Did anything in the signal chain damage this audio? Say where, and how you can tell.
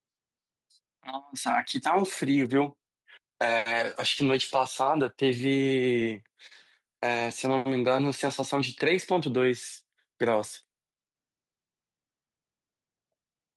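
No, nothing along the chain seems to have damaged this speech recording, and there's nothing in it that points to a problem at any stage.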